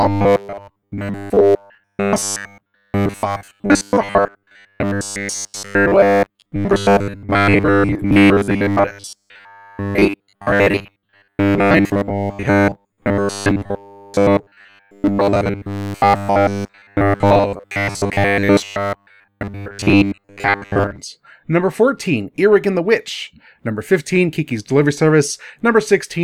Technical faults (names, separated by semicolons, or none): robotic sound from repeated short buffers